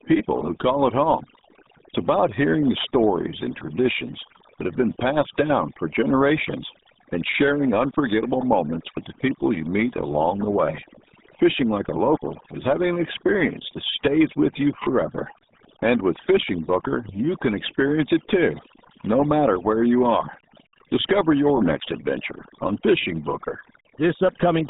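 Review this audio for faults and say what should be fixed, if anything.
Throughout the speech, the background drops and breaks up into twinkling specks: overdone noise removal is cutting quiet speech bands along with the noise.

The whole clip sounds muffled and gargly with nothing above 3.8 kHz, the heavy damage of the RealAudio 14.4 codec, which fits an 8 kbit/s stream.

To prevent this, record in a quieter room, apply gentler noise reduction, and deliver through a modern wideband codec at a higher bitrate.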